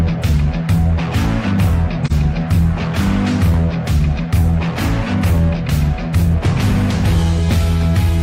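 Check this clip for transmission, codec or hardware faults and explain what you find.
One transmission fault is present: AAC frame loss with muting, at about 2.06 to 2.12 s. The decoder received no data for roughly 43 ms of audio, which fits a single lost frame. It filled the gap with silence by setting the spectrum to zero. The overlapping windows then fade the sound down into the gap and back up after it. The result is a brief, soft-edged dropout, like a momentary hole in the sound.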